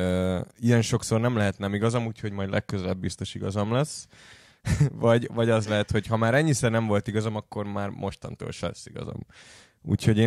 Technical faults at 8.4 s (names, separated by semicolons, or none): none